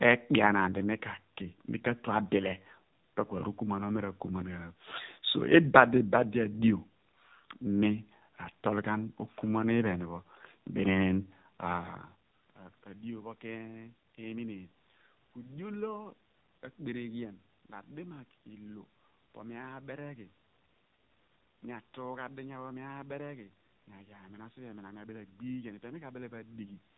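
From start to end, the AMR narrowband mobile codec at 7.4 kbps makes the speech buzzy and synthetic; a spectrogram shows a hard ceiling at 4 kHz.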